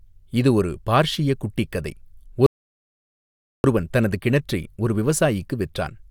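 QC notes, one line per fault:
2.46 to 3.64 s, rebuffering stall: the speech just drops to dead silence for about 1.18 s, then picks up exactly where it left off, so nothing's missing. The player ran dry of downloaded audio and sat waiting for more, which only stretches the timeline.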